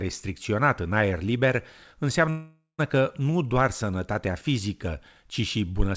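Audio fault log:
2.30–2.81 s, call audio freeze: the sound stops moving forward and the last moment is carried on as a fading buzz for roughly half a second, dropping to near silence for about 140 ms, then resumes where it left off with nothing lost, likely a jitter buffer running dry while packets were held up, adding about 486 ms of delay.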